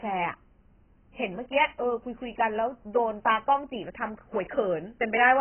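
Likely heavy AAC compression at a very low bitrate, around 12 kbps, strips this speech of everything above 3.1 kHz throughout, leaving it dull, smeared and warbly.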